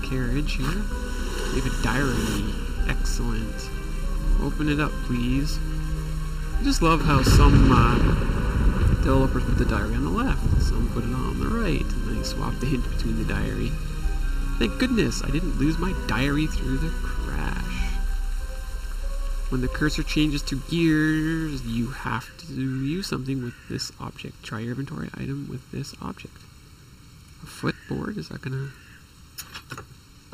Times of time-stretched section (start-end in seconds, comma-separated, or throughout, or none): none